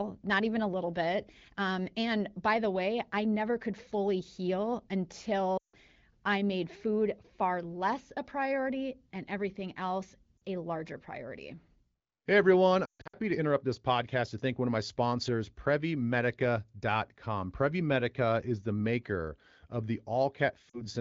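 Lost AMR speech frames occur at 5.57–5.76 s (before "I made food"), 10.38–10.42 s (between "priority and everything else" and "a larger priority"), 12.85–13.17 s (before "to interrupt this podcast") and 20.69–20.82 s. The decoder repeats the last good parameters with falling gain, so the sound dips and fades, then returns rough.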